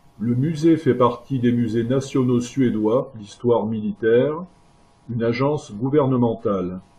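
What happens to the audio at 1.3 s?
Nothing goes wrong at 1.3 s; the speech carries on intact through that moment, with no dropout, click or other disruption to be heard.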